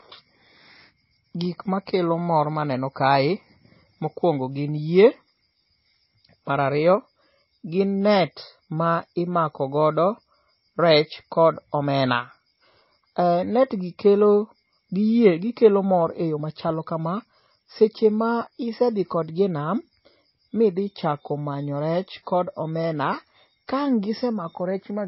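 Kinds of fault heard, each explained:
MP3 compression: likely an MP3 encoder starved of bits, fitting roughly 24 kbps, removing everything above 5.6 kHz and leaving the speech dull, watery and plainly smeared.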